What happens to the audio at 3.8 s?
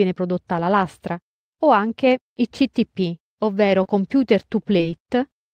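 A short concealed packet loss hits the speech between 3.83 and 3.86 s. About 20 ms of audio never reached the decoder in time, so the receiver invented a replacement, extending the sound that came just before it for around 16 ms, either by repeating its pitch or by shaping noise to match, and then crossfaded back into the real signal. The result is a brief smear or wobble.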